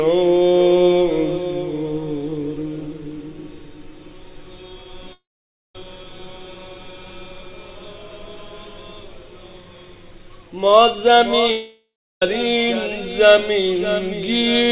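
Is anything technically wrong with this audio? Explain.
Yes, there are two gaps. At 5.13–5.75 s and 11.51–12.22 s there's a likely long network dropout: the last sound smears into a fading buzz, then goes silent. The lost 0.6–0.7 s never returns.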